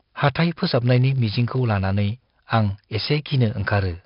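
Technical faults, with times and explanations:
Throughout, filter restarted on every block: a steady 50 Hz buzz rides under the speech and rises and falls with its level. The filter loses its state at each block boundary and restarts from silence, so every block opens with a small transient, which fits 20 ms blocks.
Throughout, 4-bit ADPCM compression: heavy gritty hiss clings to every loud syllable, with roughened attacks where the adaptive step size lags behind sudden changes. Nothing is present above 5.3 kHz, which points to a low sample rate near 11 kHz and a bitrate around 44 kbps.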